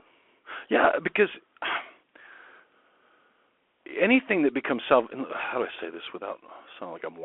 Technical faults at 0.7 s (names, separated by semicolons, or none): Bluetooth CVSD headset codec